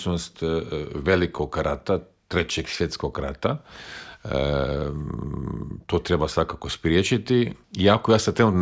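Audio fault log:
Nothing stood out on listening to this audio.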